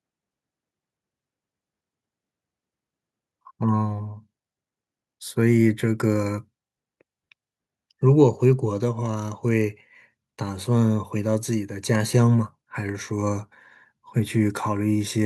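No technical faults can be heard in this recording.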